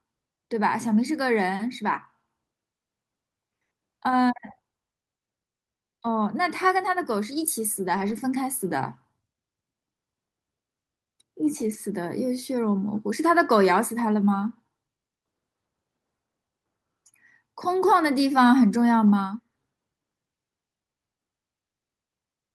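At 7.93 to 8.19 s and again at 11.61 to 11.75 s, the speech turns briefly rough and noisy. This is a lost packet rebuilt from error correction. Low-bitrate copies carried in later packets fill the losses, so no gap opens.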